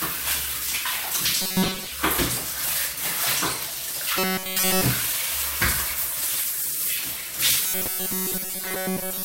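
Robotic sound from repeated short buffers appears from 1.42 to 1.87 s, from 4.19 to 4.82 s, and from 7.66 s to the end. Each time the audio takes on a rigid, metallic buzz at 188 Hz. This is likely a fragment of about 5.3 ms being replayed while fresh audio is skipped. In the first stretch most of the sound is made of these repeats, and in the later two nearly all of it.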